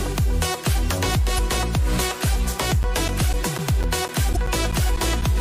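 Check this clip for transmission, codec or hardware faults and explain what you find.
Two kinds of fault are present: damaged compressed data twice, and a run of periodic dropouts.

Damaged data in a compressed stream, 1.35–1.39 s and 4.33–4.37 s: corrupted frames make the decoder lose sync and hunt for the next header, producing a brief disruption.

Periodic USB or driver dropouts, 2.83–5.22 s: every 0.25 s a blocked bus or driver loses roughly 10 ms of audio, replaced by silence. This is heard as about ten evenly spaced ticks.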